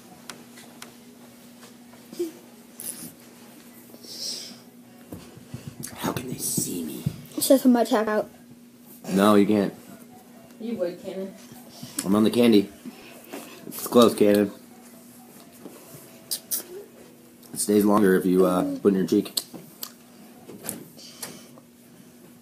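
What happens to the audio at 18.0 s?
At 17.98 s about 50 ms of audio vanishes, likely audio missing between chunks every 5 s; the waveform shows an abrupt seam, a vertical spectrogram line.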